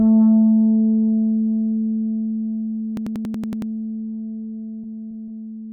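A system hang loop runs from 2.97 to 3.72 s. The computer or driver froze while the hardware replayed one 92.9 ms stretch eight times, a 10.8 Hz machine-gun stutter that fits a 4096-sample ring buffer. Repeated packet loss (robotic sound) follows from 4.82 to 5.73 s. Successive dropouts were each patched by extending the last sound, leaving choppy, robotic audio with gaps.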